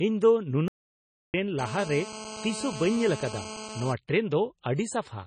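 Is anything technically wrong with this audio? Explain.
Yes, there are three problems here, all on a speech clip.

Across the whole clip the speech has a watery, swirly texture with smeared consonant attacks, and nothing comes through above about 9.3 kHz. That's likely MP3 compression, and heavy at that: starved of bits, the encoder keeps dropping weak frequency lines that flicker on and off from frame to frame, and it chops the treble at a fixed point. The damage points to a low bitrate, something like 24 kbps.

From 0.68 s to 1.34 s the audio cuts out completely for about 0.66 s, with dead silence and no room tone, then picks up again mid-flow. That reads as an audio dropout to silence, likely from the input being lost briefly (a dropped link, a device coming loose or a stray mute) while recording carried on writing nothing. Whatever was said in that gap is gone.

From 1.59 s to 3.93 s there's a hard, raspy buzz at 217 Hz, full of harmonics and about 12 dB below the speech. 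That's GSM phone buzz from a 2G handset in a call nearby. It transmits in bursts 217 times a second, and the audio circuitry rectifies those radio pulses into the signal path. Because the phone is in a call, the buzz holds nearly steady the whole time it's there, and it has nothing to do with the speech itself.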